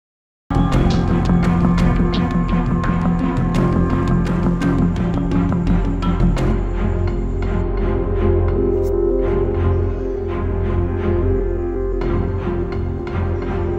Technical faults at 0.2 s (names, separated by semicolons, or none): cut-off start